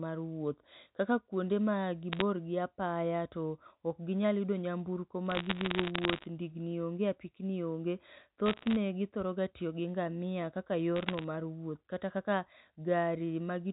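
Bit errors on a digital phone line strike in four bursts: 2.12 to 2.21 s, 5.30 to 6.26 s, 8.46 to 8.76 s and 10.96 to 11.24 s. Roughly 0.4 to 0.7 percent of the bits arriving on the telephone-coded line are flipped, and each flip corrupts a single sample. When a sign or high-order bit is hit, that sample jumps far off its true value, producing a sharp tick. Packed together, these ticks form a crackle over the speech, longest in the second burst.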